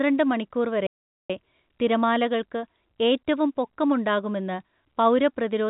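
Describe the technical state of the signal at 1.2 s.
At 1.2 s you're right in the middle of a playback stall, a gap of silence running from about 0.87 s to 1.30 s, roughly 0.43 s in all. The speech just stops mid-flow, then picks up again with "തിരമാലകൾക്ക് ഏറ്റവും പൊക്കം ഉണ്ടാകുമെന്ന്". The likely cause is the player starving for data or its thread getting blocked, so nothing reached the output until it caught up. The narrow telephone band, with nothing above 4 kHz, holds on either side of the gap.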